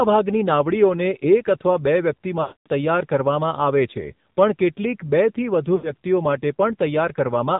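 Throughout, the speech sounds buzzy, synthetic and boxed in below 4 kHz: the AMR narrowband mobile codec at a low bit rate, fitting its 7.4 kbps mode, squeezes the voice into a coarse pulse-driven model. From 2.42 to 2.67 s, just after "એક અથવા બે વ્યક્તિ", the sound smears into a drawn-out tone and fades to silence, then returns rough. At 5.76 to 5.94 s, after "કેટલીક બેથી", there is a shorter dip and warble. Both are lost AMR speech frames, about 240 ms and 80 ms of them, during which the decoder repeated its last good settings at falling gain.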